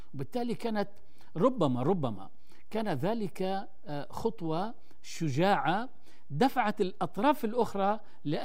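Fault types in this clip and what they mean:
DC offset: the whole speech waveform sits shifted off zero by a constant amount of about -35 dBFS for the full clip. It is inaudible as sound, but it eats into headroom and shows as steady energy at the very lowest end of the spectrum, underneath the speech.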